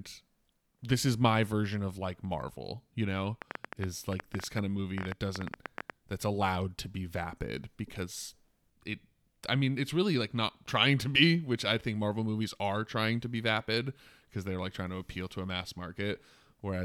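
From 3.42 s to 5.91 s a train of clicks runs over the speech, ending just before "that's allowed to be". Around thirty similar sharp pulses arrive at close to 9.7 per second, spaced unevenly, so the effect is an erratic ticking rather than a steady buzz. The peaks stand roughly 15 dB above the speech and stay audible in the gaps between words. The likely source is electrical interference or a faulty connection or power supply.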